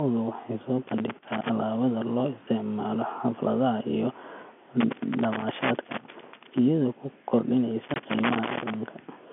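From 0.88 to 1.50 s, loose connector crackle appears: a worn or dirty contact repeatedly opens and closes, chopping the speech and adding pops from any DC on the line. It sounds like irregular scratching. On a waveform it shows as ragged spikes and sudden dropouts; on a spectrogram, as scattered vertical broadband streaks. It returns from 4.81 to 6.59 s, ending just before "iyadoo ku", and again from 7.84 to 8.74 s. Inside that last burst, from 7.94 to 7.96 s, packet loss filled with silence cuts a 20 ms hole, which fits two lost 10 ms packets replaced by silence. The waveform drops to a flat line with sharp edges at both ends, and the spectrogram shows a blank vertical gap bordered by thin broadband lines. The band stays within the telephone range of G.711 throughout.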